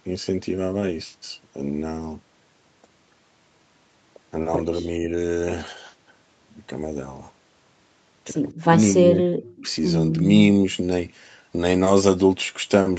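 Speech suppressed in double talk, 4.81 to 5.08 s and 8.9 to 9.66 s: a slight dip, then a drop of about 15 dB, likely an echo canceller muting overlapping talk.

Echo leak, 9.47 to 9.72 s: a faint copy of the voice, about 25 dB down, returns 242 ms late, likely residue a loudspeaker-side echo canceller let through.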